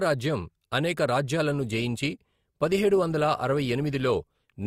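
Speech, with an adaptive stream at a lower bitrate from 1.47 s to the end. The codec artefacts thicken abruptly, which points to a switch from about 64 to 32 kbit/s Opus. Unlike packet loss, there is no gap or glitch, just a sudden, sustained quality step.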